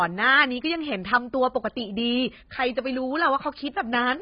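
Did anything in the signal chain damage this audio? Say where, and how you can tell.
Yes, at the codec stage. The whole clip is dull, with nothing above 5 kHz, and sibilants and held vowels have a smeared, fizzy warble. That's likely heavy AAC compression, with the encoder dropping the top band and starving the rest, which fits a bitrate around 16 kbps.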